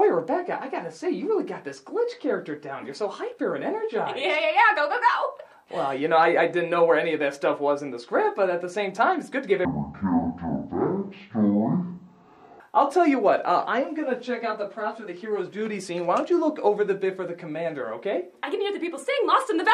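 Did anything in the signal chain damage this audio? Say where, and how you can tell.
Yes, at the sample-format conversion stage: stereo read as mono from 9.65 to 12.6 s. The audio drops to half speed and falls a full octave, 12 semitones. Interleaved left and right samples are read as one channel, doubling its length.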